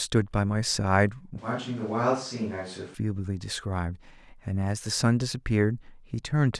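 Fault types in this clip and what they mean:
Switch to a distant microphone: from 1.39 s to 2.94 s the voice abruptly goes roomy and hollow, loses its low end, drops around 5 dB, and picks up room noise sitting maybe 25 dB below the speech. Then it snaps back just as suddenly. That's the sound of the close mic dropping out and a farther one, likely a camera or room mic, carrying the recording for that stretch.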